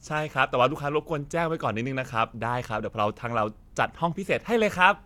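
Nothing in the speech signal points to a technical fault at any moment: level, timing and continuity hold steady throughout.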